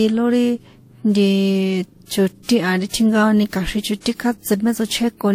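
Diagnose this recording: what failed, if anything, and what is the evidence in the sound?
The codec stage most likely failed through transcoding between lossy codecs: the speech was encoded twice, once with a Vorbis-like codec near 51 kbit/s, then again as WMA near 64 kbit/s. Throughout, nothing exists above 16.6 kHz, and two distinct sets of coding artefacts overlap.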